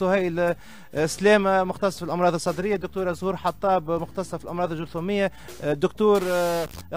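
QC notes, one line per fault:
6.15–6.81 s, stuck bit: harsh buzzy distortion, likely from one converter bit held fixed, pushing about half the samples off by a step near -30 dBFS. The waveform shows sudden step jumps, and the spectrogram shows dense broadband hash above the sound.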